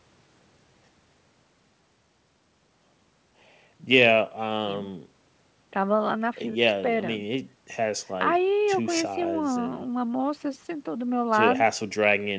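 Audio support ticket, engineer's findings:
Nothing stood out on listening to the speech, with the high end stopping near 8 kHz as the G.722 call link at 64 kbps would give.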